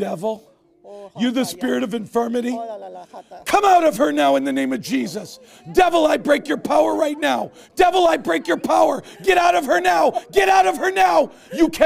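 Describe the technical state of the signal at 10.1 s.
At 10.1 s the signal is intact, with no audible fault at that moment.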